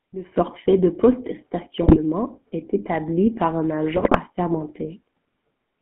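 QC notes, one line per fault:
Throughout: GSM full-rate codec. The speech has the gravelly, buzzy roughness of the original GSM coder, which rebuilds the voice from a vocal-tract filter fed by a sparse, evenly spaced pulse train, so fine detail in the excitation is lost and plainly audible. The line band sits between 150 Hz and 3.4 kHz, leaving no air or sibilant sparkle above that, consistent with a 13 kbps full-rate channel.
0.36 s onward: sudden gain jump. The level steps up by about 15 dB between one sample and the next and stays raised to the end, with the background noise rising by the same amount as the speech. Nothing ramps the change in, so it lands as an abrupt step. The likely cause is a gain setting or bit shift applied instantly in the digital path rather than faded in.
1.82 to 1.99 s and 3.96 to 4.17 s: GSM bit errors. Two bursts of squawking, popping and gargling break up the speech, each lasting about a fifth of a second. 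Corrupted bits reaching the decoder scramble its filter, pitch and gain values, so each affected frame comes out with a bent spectrum or a sudden level spike. The bit error rate is roughly 3 percent in the first burst and just over 2 percent in the second, the pattern of a weak radio link.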